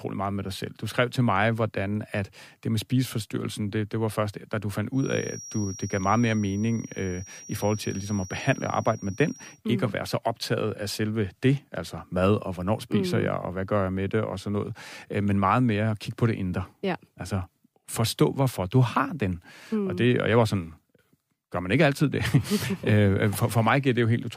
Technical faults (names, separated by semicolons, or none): feedback whistle